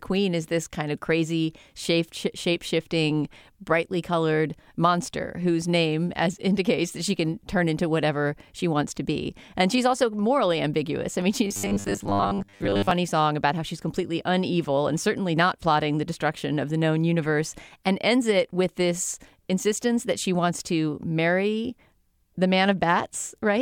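From 11.45 to 12.91 s the speech collapses into robotic sound from repeated short buffers: a rigid metallic buzz at 100 Hz. The likely cause is audio arriving too seldom, so a 10 ms chunk is looped in place of most of the real signal. The spectrogram shows evenly spaced 100 Hz harmonic lines, and the waveform shows identical repeating segments.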